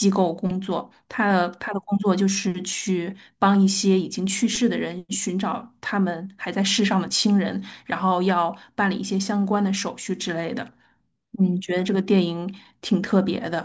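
No dropouts, glitches, level jumps or other technical faults can be heard anywhere in the recording.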